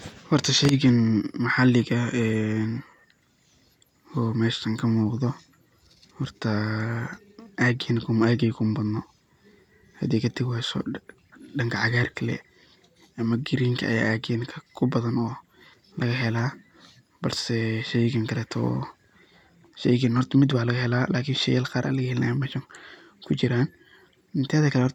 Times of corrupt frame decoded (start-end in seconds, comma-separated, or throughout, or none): none